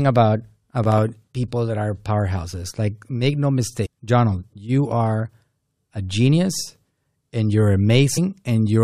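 From 0.84 to 1.09 s, just before "people that are powerhouses", processor overload crackle rides on the speech: the processor misses a handful of very short buffer deadlines, each around 1.5 ms, and each missed buffer becomes a hard-edged gap of silence, heard together as gritty tearing.

At 3.84 to 3.87 s, right after "make no", and again at 8.16 s, damaged data in a compressed stream causes the decoder to misread corrupted frames and lose sync. Each event is a brief disruption in the sound.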